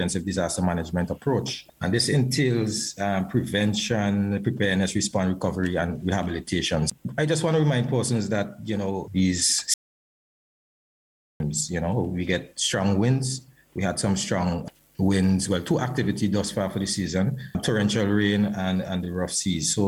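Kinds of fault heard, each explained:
Audio dropout to silence: from 9.74 s to 11.40 s the sound cuts off abruptly into silence with no room tone, then resumes mid-flow. About 1.66 s of material is missing, likely because the input signal was lost while recording continued writing silence.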